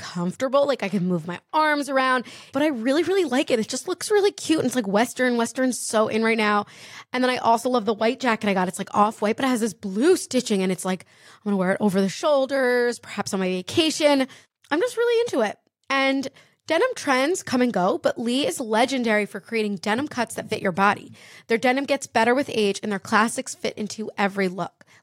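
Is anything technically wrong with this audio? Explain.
No, nothing technically wrong can be heard in this speech recording. There is no fault in it to point to.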